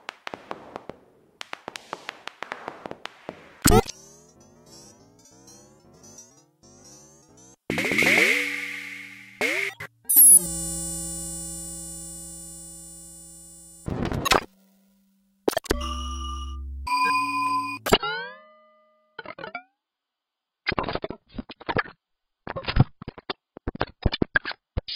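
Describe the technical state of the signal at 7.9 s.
At 7.9 s the audio is intact, with no audible technical fault at that moment.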